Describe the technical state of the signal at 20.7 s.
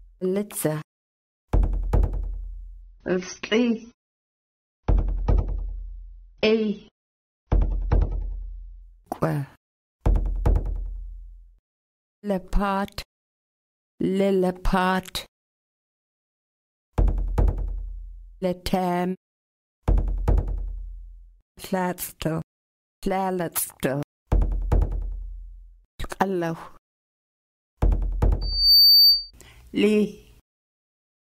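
At 20.7 s the signal is intact, with no audible dropout, distortion or other technical fault at that moment.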